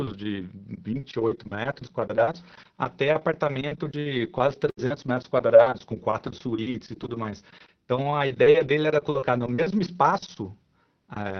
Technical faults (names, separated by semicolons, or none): burst of packet loss; lost packet rebuilt from error correction